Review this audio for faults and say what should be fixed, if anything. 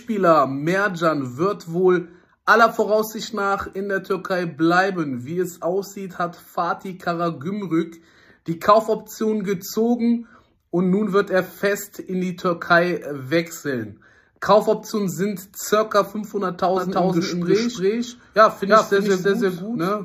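From 16.77 s to the end, each sound repeats as a dry, full-band copy about 300 ms later at roughly equal level, starting abruptly. This doubled audio track is likely the same signal captured again through a slower path and mixed in. To prevent it, route each source into the mix through one path only.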